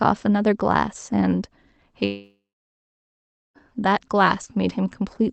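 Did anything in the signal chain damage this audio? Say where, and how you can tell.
Yes, at the network stage. From 2.05 to 3.58 s the speech stops. A fading buzz continues the last sound, then about 1.15 s of silence follows. The speech resumes with 1.5 s missing, which points to a likely long network dropout on the Opus call path.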